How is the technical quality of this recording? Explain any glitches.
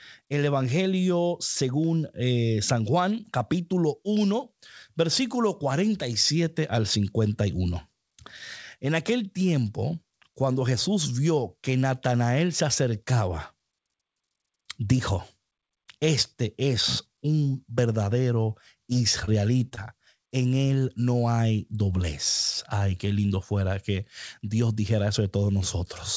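Four brief network glitches cluster between 18.9 and 19.8 s of the speech, heard over a wideband call path with nothing above 8 kHz.

At 18.93 to 18.97 s there is a short stall from a late packet. The jitter buffer ran dry, so the receiver stretched the last sound for about 16 ms, then resumed with nothing lost. It is heard as a slightly held sound.

At 19.25 to 19.29 s, 19.69 to 19.73 s and 19.75 to 19.79 s there is short concealed packet loss. About 20 ms went missing each time, and the receiver extrapolated the preceding audio to bridge the gap. Each one sounds like a brief smear or wobble.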